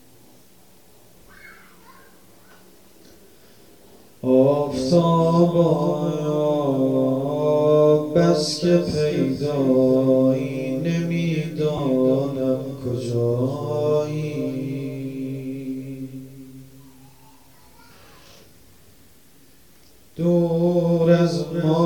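From 11.77 to 11.79 s there are lost LE Audio frames. About 20 ms of signal goes missing, which fits two 10 ms frames. The LC3 decoder fills the gap by repeating the last spectrum with random signs. This gives a brief, grainy, noisy smear in place of clean sound.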